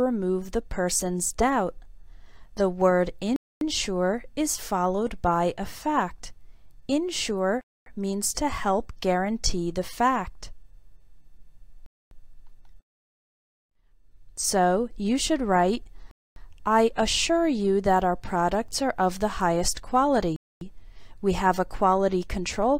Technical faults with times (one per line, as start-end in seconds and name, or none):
3.36-3.61 gap between chunks
7.61-7.86 gap between chunks
11.86-12.11 gap between chunks
16.11-16.36 gap between chunks
20.36-20.61 gap between chunks